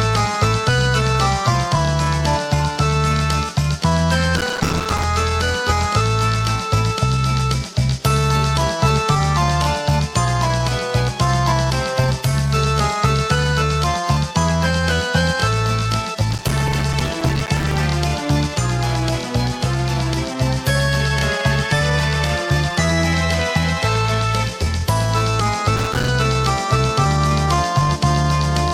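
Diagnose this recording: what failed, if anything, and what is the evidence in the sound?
The failure is at the driver or buffer stage: processor overload crackle in three bursts, from 4.37 to 5.04 s, 16.31 to 17.76 s and 25.76 to 26.08 s. The processor repeatedly failed to fill buffers of a few milliseconds in time, and each miss dropped a short silent gap, dozens to about a hundred per burst. On a waveform these are many tiny flat gaps with abrupt edges. A spectrogram shows dense vertical broadband streaks through each burst.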